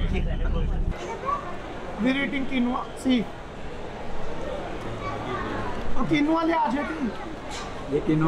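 No technical faults can be heard anywhere here.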